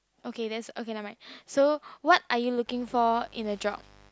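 Sharp switching spikes from a dimmer, a rectifier or a missing shield leak into the signal path at 2.64 s and stay until the end of the speech, producing mains buzz. The spikes repeat twice in each 50 Hz cycle, stacking harmonics of 50 Hz up into the kilohertz range. They sit roughly 30 dB below the speech, so the buzz is heard as a steady, raspy edge under the speech rather than a low, smooth hum.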